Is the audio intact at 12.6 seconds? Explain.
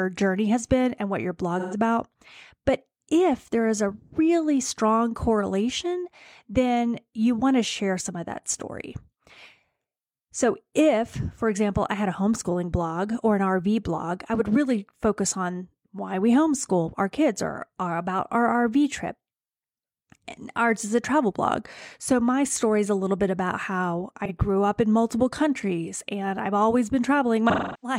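Yes, the speech at 12.6 seconds is intact, with no dropout, glitch or other audible fault at that moment.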